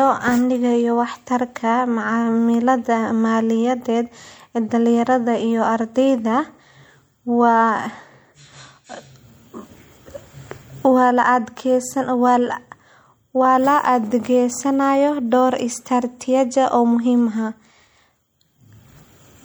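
Speech runs the full clip with plainly audible MP3 compression damage throughout: a watery, swirling texture and chirpy, metallic s sounds, likely from low-bitrate encoding, which fits 64 kbps. A spectrogram would show the treble sliced off flat and speckled, flickering holes where quiet components drop out.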